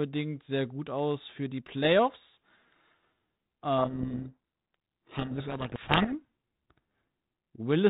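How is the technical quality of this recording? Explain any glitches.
Quality is marred by one clear glitch: a codec payload misread from 3.78 to 6.14 s in this telephone-band G.726 speech. The harsh distortion points to the code words' bits being read in the wrong order, so the speech is buried. On a spectrogram, dense broadband noise smears across the whole band up to 4 kHz; the waveform turns ragged and solid.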